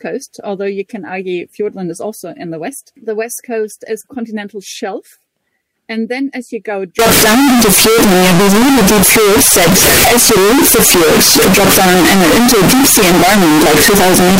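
From 6.99 s to the end at 14.39 s, the sound turns into a near-square, very loud, harsh wall at an almost fixed, high level, with background hiss as loud as the main sound. It is likely a float read as integer: 32-bit float samples taken as 32-bit integers. Unlike ordinary clipping, quiet passages jump to full loudness, yet pitch stays traceable.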